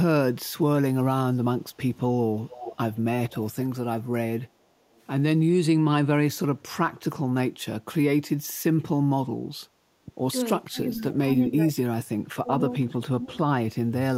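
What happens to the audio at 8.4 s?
Nothing goes wrong at 8.4 s; the speech carries on intact through that moment with no dropout, click or distortion.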